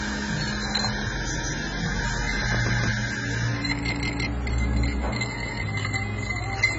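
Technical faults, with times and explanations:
Throughout, AAC compression: the sound is dull and smeared, with nothing above 7.8 kHz and a warbling, fizzy texture on sustained and hissy parts. This is likely heavy AAC-LC coding at a low bitrate, around 16 kbps. The coder drops high bands and quantises the rest coarsely, so detail goes missing. A spectrogram shows a flat ceiling at 7.8 kHz, with holes and blotchy patches below it.
1.37 to 1.54 s, 2.73 to 2.90 s, 3.93 to 4.27 s and 5.46 to 5.63 s, repeated buffer: a 0.17 s piece plays again, which fits an 8192-sample buffer. At 3.93 s it plays twice more. Each repeat brings a hard join and an audible stutter, and it stands in for the new audio that should have played, about 0.15 s per repeat. On the waveform, identical blocks sit side by side with abrupt seams, and the spectrogram shows matching copied patterns.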